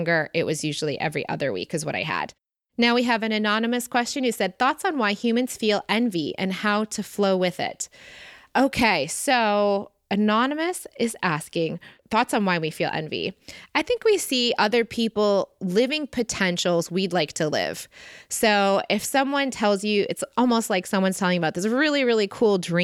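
No technical faults can be heard anywhere in the speech recording. There is nothing to place on a timeline or trace back to a cause.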